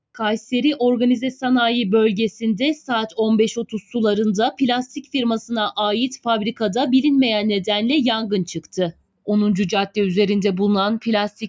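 Throughout the clip, a noise suppressor applied to music or sounds, tuned for speech and left running, keeps pulling sustained parts down by roughly 5 dB. The level pumps and flutters with the material rather than staying uniformly quieter. From 3.66 to 3.93 s, and again from 8.92 to 9.28 s, the noise suppressor cuts the sound harder, by up to about 16 dB and then about 19 dB. Held tones and decays sink for a few hundred milliseconds while attacks mostly come through. A dropout, by contrast, would silence everything at once.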